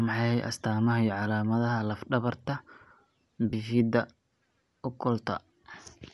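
Throughout the speech, a transform codec is discarding much of the upper spectrum and filling it with noise, likely Bluetooth LC3 compression at a rate consistent with about 48 kbps in 10 ms frames. This gives the voice a plainly audible breathy, grainy edge from start to finish.

From 3.50 to 3.53 s, lost LE Audio frames force the decoder to reuse the previous spectrum with scrambled signs. That 30 ms gap, which fits three missing frames, becomes a short noisy smear. At 5.73 s, a single lost frame produces a briefer smudge.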